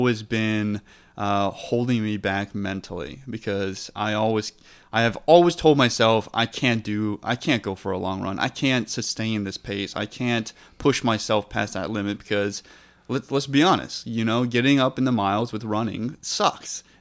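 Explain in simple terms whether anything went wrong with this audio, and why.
Nothing went wrong; no faults can be heard here.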